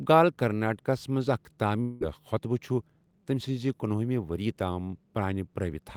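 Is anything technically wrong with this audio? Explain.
Yes, one problem. From 1.81 to 2.03 s the speech turns into a buzzy, fading smear of the last sound, then picks up again with 200 ms gone. That's likely a long network dropout, with the receiver stretching what it had to cover the gap.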